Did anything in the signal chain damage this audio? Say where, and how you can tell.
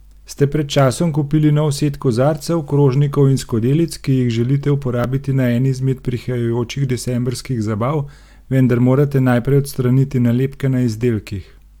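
Yes: an overlap between stream segments during streaming playback. Skips at 5.04 s and 11.03 s, six seconds apart, where the overlap trimming removed real speech.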